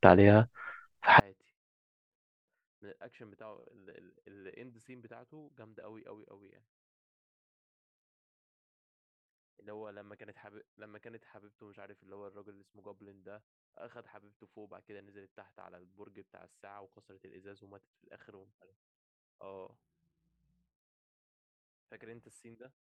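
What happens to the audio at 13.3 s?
At 13.3 s the speech has nearly vanished, down about 36 dB from 1.2 s to the end. That's likely one channel inverted, cancelling the centred voice when summed to mono.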